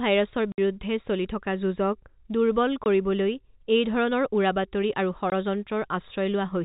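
Packet loss filled with silence at 0.52–0.58 s, just before "চলি থকা যুঁজক", then at 2.84–2.86 s and at 5.30–5.32 s after "উৰাবাতৰি আৰু". Missing packets became hard-edged silent holes: 60 ms first, which fits three 20 ms packets, then 20 ms each.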